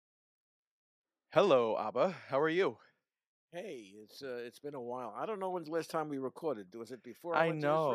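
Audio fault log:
No fault is heard anywhere in this speech recording. Nothing in it calls for an entry in this log.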